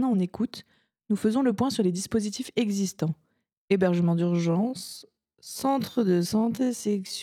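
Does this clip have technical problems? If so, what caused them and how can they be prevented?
Yes. From 4.23 s to the end, the sound abruptly drags to about half speed (0.526×) at unchanged pitch: a time-stretched section, likely software repeating short slices to lengthen the audio. Prevent it by fitting timing through editing rather than stretching, or by using a higher-quality stretch algorithm within modest ratios.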